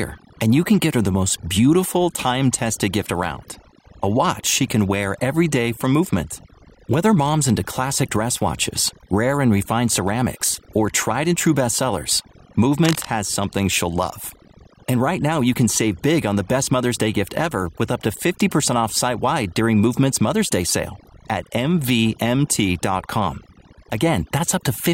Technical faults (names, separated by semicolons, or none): overdone noise removal; cable scratch noise